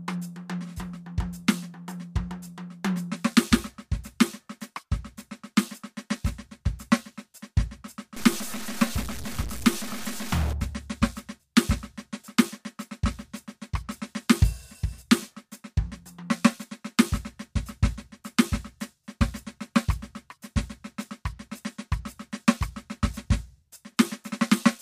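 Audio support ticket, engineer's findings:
Harsh, buzzy distortion on the music, 8.17 to 10.53 s, with quiet passages filling with gritty noise. Stuck bit, likely a bad data line or converter: steps of roughly -30 dBFS hitting about half the samples, following the waveform.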